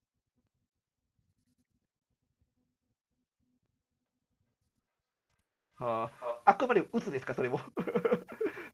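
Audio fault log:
4.06–6.54 s, feedback echo between two devices: each syllable returns roughly every 0.4 s, thinner and ringing, peaking at about -30 dB below the speech. A second device replays the far microphone's audio, which is picked up again. A spectrogram shows faint, evenly spaced copies of each syllable.
4.69–5.32 s, repeated packet loss (robotic sound): four holes, the longest 180 ms, are filled by stretching the preceding sound, so over half this span is synthetic and the result is choppy. A spectrogram shows smeared, frozen harmonic bands alternating with brief real speech.
5.41–5.74 s, long network dropout: about 300 ms of audio is gone and silence is left, likely because nothing arrived over the network for that stretch. Speech resumes afterward without the missing part. The waveform shows a flat gap and the spectrogram a blank vertical band.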